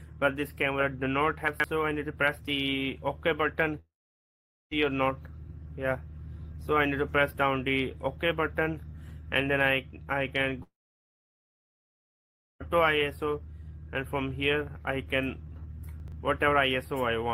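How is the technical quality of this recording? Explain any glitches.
Two kinds of glitch, each happening twice, so the recording isn't clean.

Chunks out of order at 1.48 to 1.64 s and 16.0 to 16.12 s: a 40 ms chunk plays late, three chunks behind in the first case and two in the second. Nothing's missing, but the scrambled order and hard joins give a brief jumbled stutter.

Long network dropout at 3.79 to 4.73 s and 10.63 to 12.62 s: the audio stops, leaving a short fading buzz for about a tenth of a second, then silence for about 0.81 s and 1.89 s respectively. It likely comes from packets never arriving, so the receiver filled the gap. The sound resumes further on, with roughly 0.92 s and 1.98 s lost.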